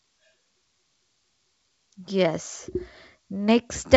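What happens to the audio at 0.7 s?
Nothing goes wrong at 0.7 s; the speech there runs on intact through the G.722 wideband telephone coding, with its usual faint upper-band hiss and no content above about 7.7 kHz.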